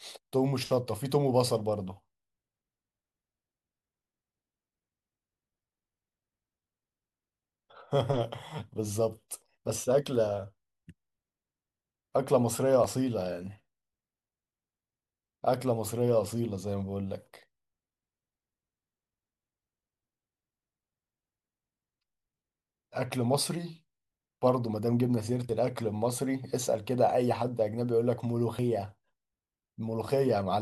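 The recording software likely failed to read its buffers before the hardware overwrote them, a dropped buffer (overrun), at 12.84, 25.49 and 28.59 s. Each time the speech jumps ahead, skipping about 20 ms, 20 ms, then a longer 70 ms or so.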